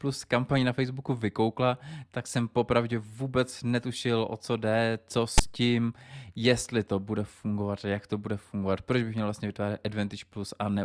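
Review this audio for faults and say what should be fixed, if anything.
At 5.38 to 5.40 s, between "o co jde co" and "tím jestli to bude", there is a hard-edged burst: file tags played as audio. Tag text decoded as samples gives a brief one-sided rasp, and the zero padding gives silence. Fix the parser to skip metadata blocks before decoding.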